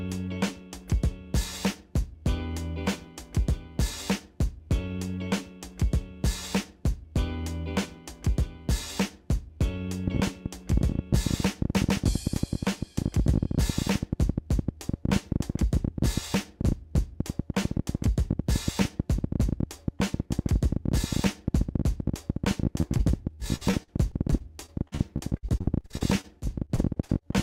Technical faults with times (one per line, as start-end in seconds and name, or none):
10.08-27.43 train of clicks
22.81-27.24 repeated packet loss (robotic sound)